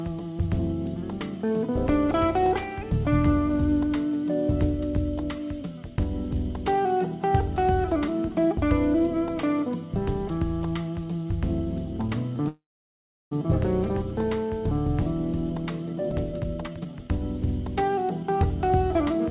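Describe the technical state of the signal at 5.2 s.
At 5.2 s the audio is intact, carried through a normally working WebRTC call path whose G.711 mu-law coding leaves nothing above 4 kHz.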